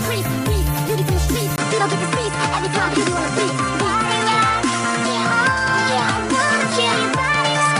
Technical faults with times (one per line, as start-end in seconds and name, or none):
1.56-7.80 input switched to a poorer device